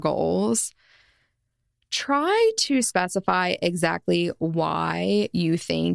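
Speech recording with no audible technical faults.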